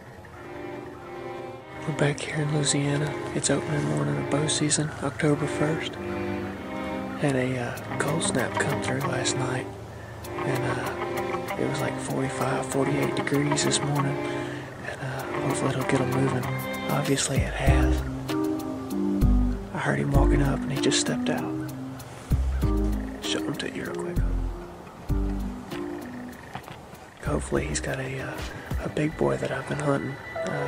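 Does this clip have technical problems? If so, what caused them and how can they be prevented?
No technical problems are audible.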